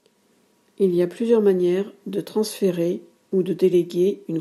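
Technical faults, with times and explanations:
No technical faults are audible anywhere in this speech recording.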